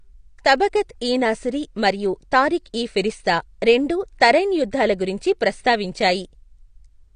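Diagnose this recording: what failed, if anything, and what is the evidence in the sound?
The failure is most likely at the codec stage: the speech appears to have passed through AAC compression, AAC-LC at a low bitrate, which fits a rate of about 32 kbps. To save bits, the encoder discards high frequencies and quantises the rest coarsely. Throughout the clip there is nothing above 9.7 kHz, so the speech sounds dull and band-limited, and the coding damage in the remaining spectrum is plainly audible.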